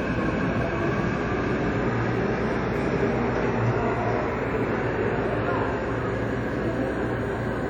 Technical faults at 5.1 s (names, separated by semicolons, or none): WMA compression